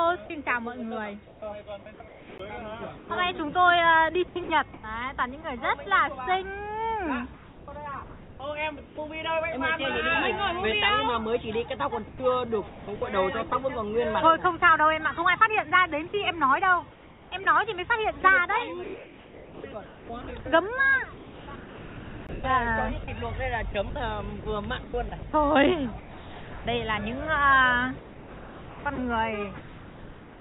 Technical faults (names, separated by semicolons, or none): sound chopped by the voice detector; CD skip; comfort noise in place of the background; sound dropped by the voice detector